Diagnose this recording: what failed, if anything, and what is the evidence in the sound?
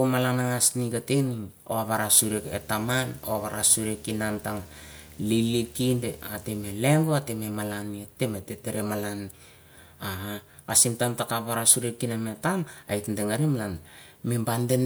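Video or display buzz, picked up in the analogue wiring, runs under the speech from 2.23 s to 6.72 s and stops just before "leiuhoh ateh malaneh hutereh". A screen or video cable is coupling into the audio path, putting a 75 Hz buzz at the display's field rate, with hash above it, at around 25 dB below the speech. On a spectrogram this appears as a band of stacked 75 Hz harmonics with fuzzy energy above them. The waveform shows a low, periodic ripple in the pauses.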